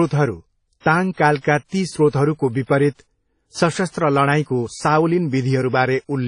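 All the way through, nothing sits above 10.1 kHz and two kinds of swirly smear overlap, likely transcoding between lossy codecs, low-rate MP3 into WMA.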